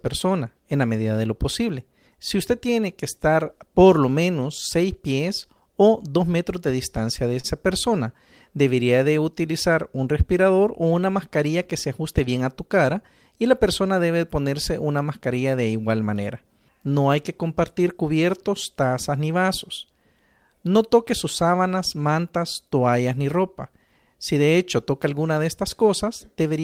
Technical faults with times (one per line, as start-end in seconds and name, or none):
7.05-7.71 repeated stalls (stutter)
17.79-18.10 jitter buffer speed-up